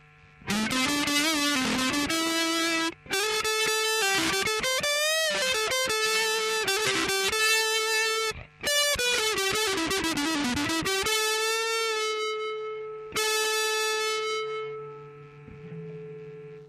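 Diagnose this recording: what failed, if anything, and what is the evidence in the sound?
Nothing failed here as far as the ear can tell, since no stage of the chain leaves any audible trace of trouble anywhere in the recording.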